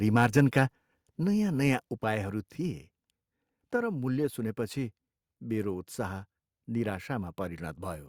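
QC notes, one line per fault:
0.2 to 0.41 s, microphone overload. The loudest syllables break up with a harsh, crackling edge. Peaks run about 2 dB past the converter's limit, so their tops are sheared flat on a small share of samples. An input volume set too high is the likely cause.
1.02 s and 2.04 s, microphone volume stepped down. Voice and background fall together in one abrupt step, by about 4 dB just before "नयाँ नयाँ" and about 3 dB just after it. The likely cause is call software lowering a hot input level.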